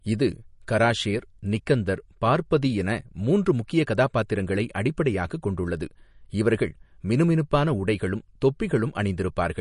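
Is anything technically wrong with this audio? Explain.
Yes. Throughout the speech there is plainly audible MP3 compression damage, likely from encoding at a low bitrate, which fits something around 40 kbps. Short of bits, the encoder has removed everything above about 10.6 kHz and dropped weaker frequency lines that flicker on and off between frames. The result is a dull top end with a watery, swirling texture, metallic chirping on s sounds, and softened, smeared onsets.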